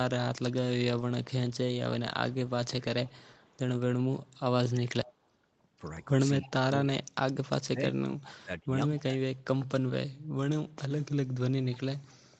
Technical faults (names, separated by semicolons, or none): echo leak; speech suppressed in double talk